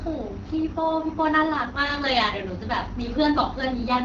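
From start to finish the speech carries the signature of the AMR wideband (HD Voice) codec, and there is no content above about 7.6 kHz. Below 6.4 kHz the voice is rebuilt from a pulse-excited vocal tract model, with the top band filled by shaped noise. The damage is plainly audible, a rough, raspy texture that fits the 8.85 kbit/s mode, too few bits for the model to track the voice cleanly.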